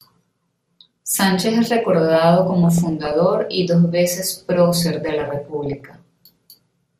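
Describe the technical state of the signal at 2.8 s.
At 2.8 s the speech sits inside a burst of DAB burbling running from 2.63 to 3.12 s. Bit errors have slipped past error correction into the audio data. Corrupted samples put short blips of noise into single sub-bands, and corrupted scale factors make sub-bands jump in level for up to a frame. It sounds like burbling noise blips over the speech. The error rate is around half a percent.

Underneath, the whole clip carries MP2 compression artefacts, likely from a low bitrate. The damage fits a rate near 80 kbps. Upper sub-bands drop out and flicker. The remaining bands are coarsely quantised, so the speech sounds dull, with a gurgling, granular edge.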